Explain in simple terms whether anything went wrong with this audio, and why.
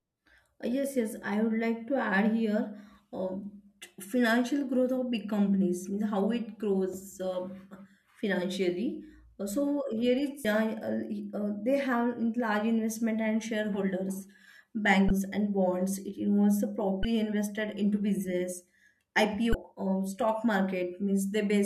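Damaged data in a compressed stream caused four brief glitches, at 10.44 s, 15.07–15.10 s (before "and bonds"), 17.02–17.05 s (after "involves the"), and 19.51–19.54 s. The decoder hit corrupted bytes, lost its place and resynchronised.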